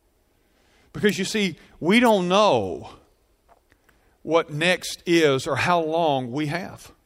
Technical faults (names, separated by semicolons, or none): none